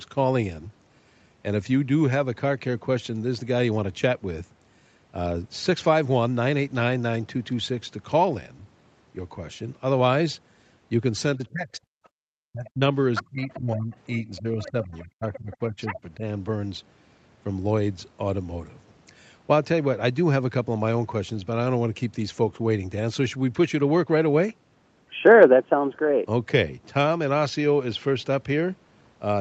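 Speech over a call link, with nothing above 8 kHz, runs into trouble between 11.36 and 16.23 s as the two sides start talking over each other. The main talker dips sharply from 11.36 to 11.84 s (about 25 dB at worst), again from 12.47 to 12.91 s (about 40 dB), and more gently but for roughly two seconds across 13.22 to 16.23 s (about 20 dB). This is speech suppressed in double talk, likely from an echo canceller that cannot separate near speech from loudspeaker echo and turns everything down. It differs from a network dropout because the voice thins and sinks in uneven pieces rather than vanishing in clean, fixed-length gaps. The other side's voice leaking through is heard as a faint scrap at 12.04 to 12.09 s (about 35 dB under the talker), a strong burst from 13.15 to 13.6 s (only about 5 dB under), and a longer stretch from 13.93 to 15.99 s (about 15 dB under). Its likely cause is residual loudspeaker pickup that the canceller failed to remove. 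It is a second voice rather than a reverberant tail of the talker, so it is not ordinary room echo. Between 12.12 and 12.19 s, for about 70 ms, the room background drops by about 32 dB and then returns. That is background gated by the echo canceller: the microphone is clamped while the loudspeaker plays. A noise gate would instead follow the talker's own level, and a packet loss would also take out the voice.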